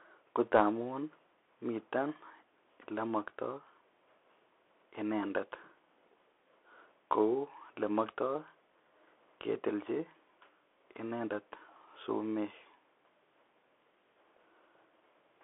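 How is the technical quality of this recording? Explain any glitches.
Poor: the whole recording goes through a Bluetooth CVSD headset codec. The speech is confined to roughly 300 Hz to 3.5 kHz, with nothing above 3.8 kHz, and the damage is plainly audible. The codec tracks the signal one bit at a time, only up or down, which fits a 64 kbps stream. Sharp s sounds come out scratchy and a granular hiss sits underneath, which sets it apart from a clean telephone band-limit.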